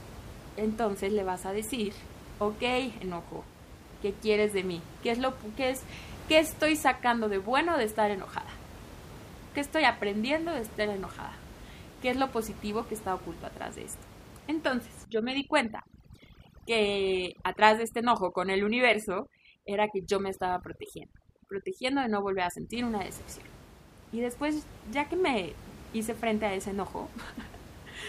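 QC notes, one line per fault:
15.05–22.74 s, overdone noise removal: in the stretch ending just before "una decepción", the room noise, about 18 dB under the speech elsewhere, falls to near silence sprinkled with twinkling specks. An over-aggressive noise reducer is cutting individual frequency bands it judges close to the noise, taking quiet speech detail with them. Unlike a gate, which mutes everything together, the loss comes band by band.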